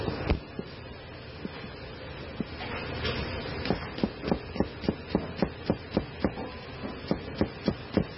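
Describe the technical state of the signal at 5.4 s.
At 5.4 s the audio carries heavy MP3 compression damage, present across the whole clip. Nothing is heard above 5.6 kHz, and weak spectral detail flickers in and out, giving a watery, swirly texture with smeared attacks, likely from encoding at roughly 16 kbps.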